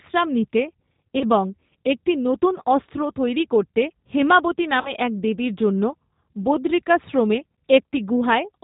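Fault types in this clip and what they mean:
G.729 codec: The speech is squeezed into a narrowband, band-limited sound with nothing above 4 kHz, and it has a plainly rough, slightly synthetic grain that fits an 8 kbit/s G.729A codec. A simple low-pass filter would only dull the sound. Here the speech is rebuilt from a coarse vocal-tract and pitch model, which is what makes it rough and synthetic.
VoIP packet loss concealed by the speech codec: At 1.19–1.25 s, just before "এবং একটি নতুন অস্ত্র", and at 4.81–4.90 s, between "অস্ত্র তৈরি করতে হ্যেমাবতি" and "এক দেবীর জন্য", the sound smears into a fading buzzy tone or coloured noise. Roughly 20 ms and 40 ms of audio are lost. These are not silent dropouts: the gap is filled, and the speech stays weak briefly afterwards.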